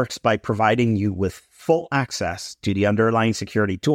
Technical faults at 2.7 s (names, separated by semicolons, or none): none